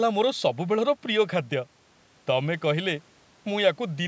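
No technical faults can be heard in this speech clip. It has passed through a call's microphone processing, which trims the lowest bass and leaves nothing above 8 kHz, as that path normally does.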